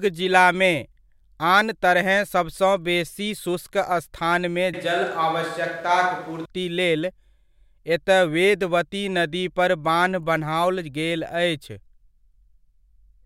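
From 4.74 to 6.45 s the voice abruptly turns roomy, hollow and bass-light, with more room noise. That's likely a switch to a distant microphone.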